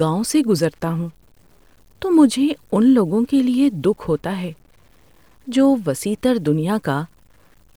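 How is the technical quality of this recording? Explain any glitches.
The recording has a constant grainy distortion that degrades its technical quality throughout.

Low bit depth without dither, present from start to finish: the speech carries a rough, gritty texture that follows the voice, thickening on quieter syllables and sputtering or dropping out in the softest passages and pauses. The likely cause is coarse quantisation with plain truncation and no dither, which fits something like 9-bit resolution. The error tracks the signal instead of forming a steady hiss, sitting roughly 40 dB below it.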